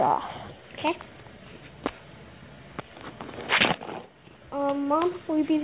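Nothing in this one stands out as a technical fault; the sound holds together the whole way with no glitches to point at.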